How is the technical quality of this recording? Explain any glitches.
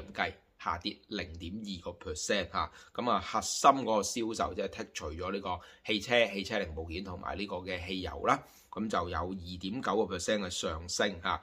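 No glitches can be heard anywhere in the recording, and the signal holds steady and intact throughout.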